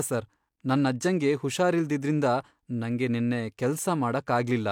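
A short bit of speech, and there's nothing technically wrong to point to anywhere in it.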